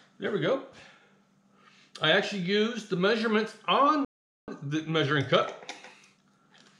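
At 4.05 s the audio cuts out abruptly in mid-flow and stays silent until 4.48 s, a gap of about 431 ms, before resuming. This is a playback stall: the output most likely starved because the player ran dry of buffered data or its thread was held up, so nothing reached the output until it recovered. On a waveform the trace collapses to a flat line across that span; a spectrogram shows a clean vertical band of near-empty energy with hard edges on both sides.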